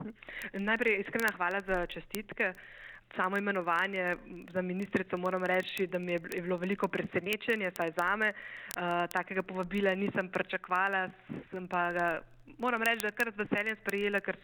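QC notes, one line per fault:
0.10–14.41 s, word clock ticks. A steady train of sharp ticks runs from start to end, one roughly every 30 ms, about 500 in all. Their strength varies from tick to tick. The receiving device is on its own clock, not locked to the sender's. The two clocks drift apart by something near 700 ppm. Each time they slip a full sample, a few samples are misread. The rhythm points to a single sample being dropped or repeated at each slip.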